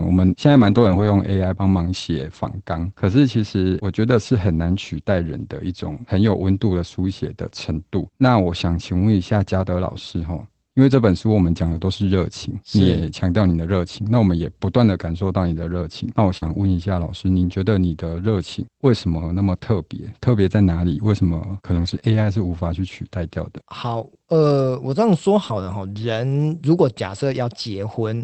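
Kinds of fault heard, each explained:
Lost packet rebuilt from error correction: at 0.55–1.05 s, 11.65–11.79 s, 16.42–16.56 s and 21.76–21.98 s, stretches of 260, 80, 80 and 120 ms were lost in transit. The following packets each carried a low-bitrate backup of the missing audio, and the decoder played those backups. There is no silence, but each stretch turns briefly coarser and grainier. The lengths fit runs of 20 ms packets.
Short concealed packet loss: at 16.37–16.44 s and 22.00–22.03 s, audio arrived too late to decode, about 40 ms and 20 ms respectively. The receiver bridged each hole by extending the preceding sound, pitched if voiced and as shaped noise if not, then crossfaded back into the real signal. Both are heard as a quick smear or wobble. The first runs straight into an error-correction rebuild, and the second follows right after one.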